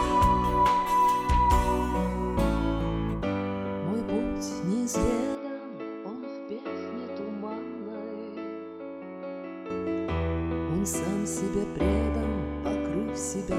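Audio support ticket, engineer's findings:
5.35 to 9.70 s: sound turns dull and boxy, nothing above 5.6 kHz, level down about 5 dB, new background noise roughly 35 dB under signal. Likely input switched to a poorer device, then back. No gap at either switch. Unlike a codec bitrate drop, the tone, level and noise floor all change together at once.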